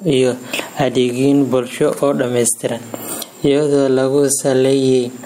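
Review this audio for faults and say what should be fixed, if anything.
Gain pumping runs through the whole speech clip: the gain ducks by around 15 dB as each loud syllable arrives, leaving the levels squashed together. The likely cause is microphone gain set far too high, with a fast limiter clamping down on every peak. Unlike a noise gate, which cuts the background out in the gaps, this lifts it. Prevent it by lowering the input gain so peaks sit well below the limiter threshold.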